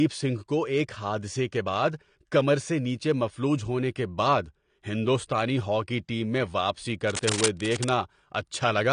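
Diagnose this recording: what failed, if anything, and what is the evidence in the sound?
The speech sounds dull and smeared throughout, with nothing above 10 kHz. This is likely AAC compression at the codec stage, fitting AAC-LC at about 32 kbps.

Right after "ہاکی ٹیم میں واپسی", dense scratching nearly as loud as the speech runs from 7.10 to 7.90 s, likely cable scratch noise from analogue wiring.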